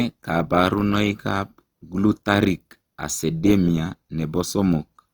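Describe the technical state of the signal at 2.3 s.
At 2.3 s the signal sits inside a stretch of Opus compression that runs through the whole clip, likely from an encoder in its music (CELT) mode working at a rate that fits roughly 24 kbps. Short of bits, it keeps each band's energy but fills the detail with folded copies of lower bands or noise. The speech therefore sounds rough and grainy, with plainly audible damage, though the bandwidth stays full, reaching about 20.2 kHz.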